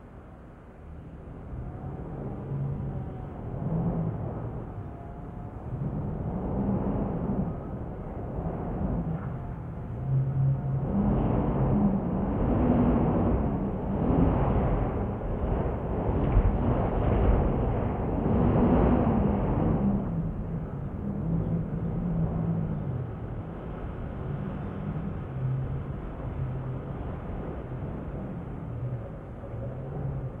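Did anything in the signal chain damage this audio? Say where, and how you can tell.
No, nothing in the signal chain damaged this audio.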